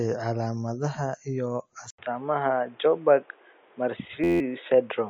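From the start, the speech carries MP3 compression damage, likely from an encoder starved at around 35 kbps. Nothing survives above 7.7 kHz, and weak detail flickers in and out, giving a watery, swirling texture rather than the clean, steady dullness of a simple low-pass filter.

Just after "calaamadaha iyo", at 1.90 s, an 80 ms silence marks what is likely an input switched to a poorer device. From there to the end the band stops at 3.8 kHz, the level shifts by about 5 dB, and a new noise floor sits roughly 30 dB below the signal. The abrupt step distinguishes it from codec loss, which stays constant.

From 4.24 to 4.40 s a system hang loop repeats an 11.61 ms slice, which fits a 512-sample buffer, 14 times. This produces a steady 86.1 Hz buzz and loses about 150 ms of sound. Because the slice is so short, it comes across as a tone, not the audible machine-gun repetition of a longer loop.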